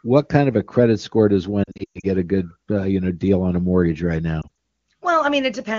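Lost AMR speech frames hit right after "a credit score does", from 1.64 to 2.07 s: roughly 260 ms dropped in patches, longest 120 ms, so the sound drops to near silence within two frames. A lighter dip or warble follows "on a mortgage right" at 4.41 to 4.50 s.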